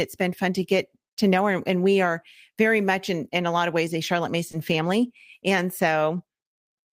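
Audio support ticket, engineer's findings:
Short concealed packet loss at 4.47–4.51 s and 4.51–4.55 s, back to back. Brief smear in the speech, about 40 ms total. Receiver jitter buffer/decoder concealment. Late packets, gap filled by extending prior sound, then blended back.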